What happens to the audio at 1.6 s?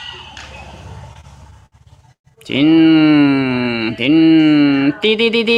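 At 1.6 s the audio is in the middle of repeated stalls (stutter), running from about 1.13 to 1.74 s. Packets arrived late, so the jitter buffer ran dry six times and the receiver stretched the last sound to fill each gap, adding about 126 ms in all, the longest about 60 ms. Nothing is lost, but the sound drags and hiccups. A spectrogram shows short frozen, smeared bands; the waveform shows repeated, briefly held stretches.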